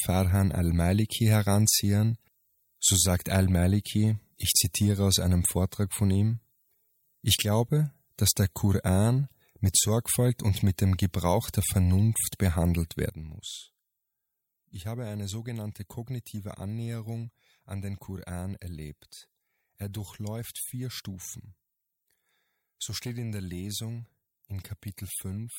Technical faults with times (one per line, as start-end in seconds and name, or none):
13.10-25.59 sudden gain jump